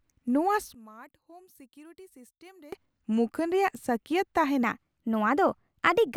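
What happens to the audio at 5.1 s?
At 5.1 s the speech sits inside a section at the wrong speed, running from 4.63 s to the end at 1.12x, likely from a clock-rate mismatch, raising pitch about two semitones.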